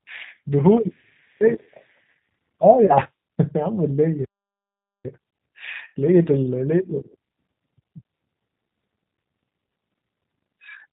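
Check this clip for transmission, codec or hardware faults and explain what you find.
Three kinds of fault can be heard. Throughout, the G.729 codec at 8 kbit/s leaves speech band-limited below 4 kHz and plainly rough and synthetic, a model-rebuilt sound rather than plain lowpass dulling.

At 2.86–2.94 s and 8.18–8.21 s, VoIP packet loss concealed by the speech codec: a roughly 30 ms gap is filled with a stretched sound that fades, unlike a hard dropout of silence.

From 4.25 to 5.05 s, a playback stall: the sound stops dead for about 0.8 s and then resumes, likely because the player ran short of data. Unlike concealment, nothing fills the gap.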